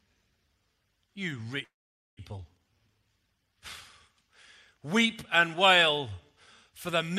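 Speech, with two network faults in sequence. From 1.63 to 2.21 s the stream was likely interrupted by a long network dropout. No audio reached the receiver, so it stretched the last sound into a fading buzz that soon decays to near-silence lasting about 490 ms. When the speech resumes, about 400 ms of it never comes back, and the timing is left displaced by roughly 150 ms. This is followed by a jitter buffer speed-up from 2.31 to 3.46 s. The buffer held more audio than its target, and to shed that excess latency the receiver repeatedly cut out pitch-period-sized slices, roughly 150 ms in total. The speech therefore runs at about 112% speed with unchanged pitch, sounding noticeably hurried over that stretch.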